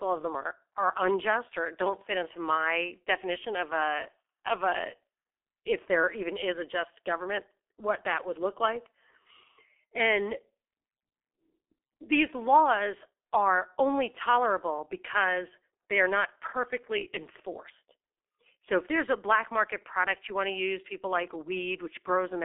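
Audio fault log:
Throughout: G.723.1 codec, the speech sounds muffled and hoarse with smeared consonants and nothing above 3.6 kHz, which fits a roughly 6 kbit/s telephone link, unlike simple band-limiting.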